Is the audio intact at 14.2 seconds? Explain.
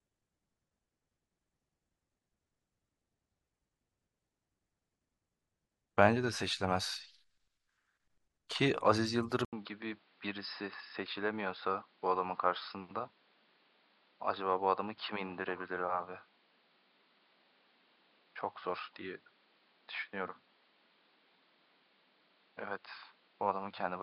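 No. At 14.2 s the speech is still inside a stretch that runs from 9.45 s to the end of the clip. The fault is an input switched to a poorer device, likely a change to another microphone or a headset's call profile. A silence of 80 ms marks the switch. After it, nothing is heard above 5.2 kHz, so the speech sounds dull and boxy. The level drops by about 5 dB. A new noise floor sits about 35 dB below it.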